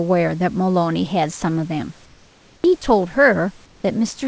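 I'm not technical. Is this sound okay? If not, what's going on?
No. From 2.06 to 2.64 s and again from 3.66 to 3.84 s, the background hiss goes flat, smooth and a touch quieter during pauses. This is likely comfort noise in place of the background: the call stopped sending the real room sound and played a steady substitute noise instead.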